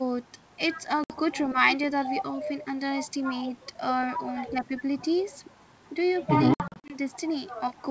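Packet loss on an ADPCM call at 1.04 to 1.14 s leaves a hard 60 ms hole, and at 6.54 to 6.96 s gaps of up to 60 ms scatter. Each loss desynchronises the decoder's predictor and step size, so speech returns briefly distorted.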